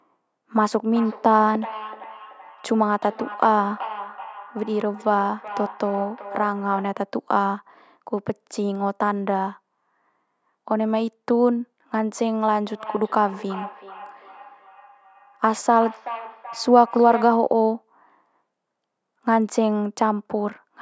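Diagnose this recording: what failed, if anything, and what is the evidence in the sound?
From 0.86 to 7.1 s, and again from 12.68 to 17.58 s, the speech comes back at a steady interval of roughly 0.4 s, each return thinner and more ringing, peaking about 14 dB and then about 13 dB below the direct speech. This is feedback echo between two devices, an acoustic loop around the call processing: a second device in the room plays this microphone's signal, the microphone picks it up again, and its echo canceller cannot remove sound it did not play itself.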